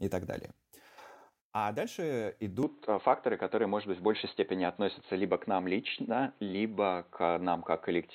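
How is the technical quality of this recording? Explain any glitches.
The recording has a clear fault: from 2.63 s to the end the speech abruptly turns dull and boxy, losing everything above 4.2 kHz, with no gap at the change. A new noise floor around 35 dB down and a level shift of roughly 5 dB point to an input switched to a poorer device, likely, rather than plain filtering.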